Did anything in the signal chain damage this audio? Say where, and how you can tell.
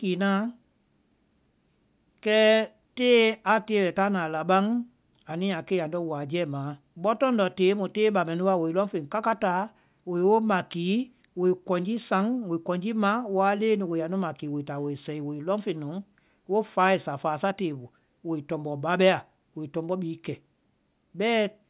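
No, nothing in this speech recording points to damage at any stage of the signal chain. There is no event in the audio that would tie a problem to the wiring, conversion, processing, transmission, storage or playback.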